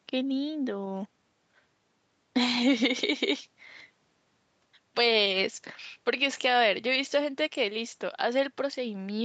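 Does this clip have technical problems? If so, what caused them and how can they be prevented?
No, nothing here needs fixing: the speech has simply been through ordinary call microphone processing and a normal WebRTC call path, which is why the highs stop at around 8 kHz, and that's expected for this kind of audio.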